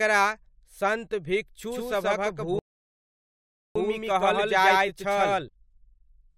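From 1.72 s to 5.48 s the speech carries a doubled audio track. A second full-band copy runs about 150 ms behind the first, at roughly the same level. It has no decay and no added room tone. The result is a hard, slapback-like doubling of every syllable. It likely comes from the signal being picked up twice, once through a slower path. The copy cuts in and out abruptly at both ends.

At 2.59 s a rebuffering stall begins. The player ran out of downloaded audio and waited for more to arrive. The speech drops to dead silence and stays there until 3.76 s. That gap adds 1.17 s to the clip. Playback then picks up exactly where it stopped, so nothing is skipped. Because the stall falls inside the doubled stretch, the delayed copy is still running on either side of the silence.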